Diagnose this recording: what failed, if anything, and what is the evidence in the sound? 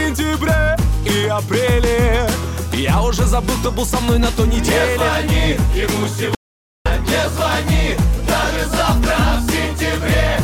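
An audio dropout to silence runs from 6.35 s to 6.86 s. The sound cuts off mid-flow and returns abruptly after about half a second of silence, with no room tone. This likely points to a momentary loss of the input link while recording continued.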